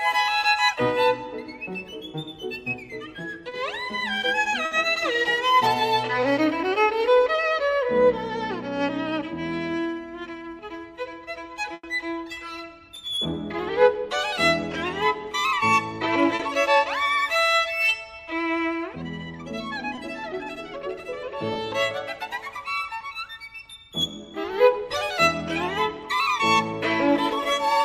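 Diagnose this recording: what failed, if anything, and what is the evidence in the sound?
The network path dropped audio, and the receiver covered it with short concealed packet loss at 3.49–3.53 s, 16.35–16.41 s, 19.95–19.99 s and 21.53–21.57 s. Each is a 20–40 ms smear or wobble where the last sound was extended. Unlike a dropout to silence, the gap is filled.

A burst of packet loss, also on the network path, occurs at 4.65–4.73 s (60 ms bridged) and 11.73–11.85 s (100 ms bridged, fading to about 30 ms of silence). The extended sound decays into a held buzz or hiss, then resumes further on. The length and fade set it apart from the brief concealed losses.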